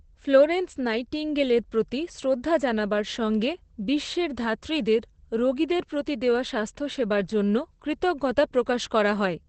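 Throughout the speech, Opus voice compression leaves nothing above 8.6 kHz, a wideband limit that fits SILK coding at a bitrate near 12 kbps. Unlike a plain low-pass filter, the coarsely coded excitation makes the speech sound hoarse and slightly robotic.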